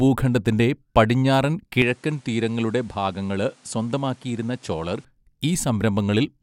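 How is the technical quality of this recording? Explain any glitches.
The recording has one clear fault. From 1.82 s to 5.05 s, the speech turns duller and a little quieter, then returns to its earlier clarity. Nothing is left above 11.4 kHz in that stretch. The level drops by roughly 5 dB. A faint new noise floor appears beneath the voice. There is no gap at either change. This is likely an input switched to a poorer device, with a narrower band and its own tone and noise.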